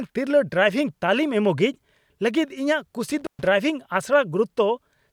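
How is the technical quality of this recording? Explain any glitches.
The recording has one clear glitch: an intermittent contact from 3.19 to 3.47 s, just after "ᱤᱧᱟᱹᱜ ᱠᱩᱥᱤ". A loose connection briefly opens the signal path for about 122 ms, cutting out the speech with crackle at both edges and leaving faint hiss. A waveform shows a near-flat gap bounded by sharp spikes, and a spectrogram shows vertical broadband streaks around a low, hissy band.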